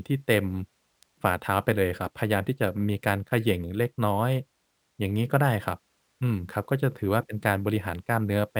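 Speech was upsampled by repeating each sample with no smoothing filter, consistent with a 24 kHz source raised to 48 kHz. This causes imaging from sample-and-hold upsampling throughout: a mirrored spectrum fills 12 to 24 kHz about 27 dB below the signal, heard as metallic fizz following the speech.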